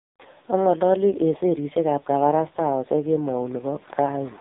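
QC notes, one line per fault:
Throughout: AMR narrowband mobile codec. The speech sounds buzzy and synthetic, with a hard ceiling near 3.8 kHz that leaves it thin and muffled. Heavy codec damage is audible. The encoder samples at 8 kHz and rebuilds the voice from a vocal-tract model excited by a few pulses per 5 ms subframe, so little of the original waveform survives. The coarseness points to one of AMR-NB's lower modes, around 6 kbps.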